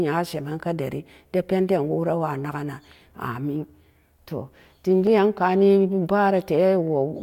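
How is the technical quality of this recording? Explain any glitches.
No glitches can be heard anywhere in this speech recording. There is nothing in it that needs explaining.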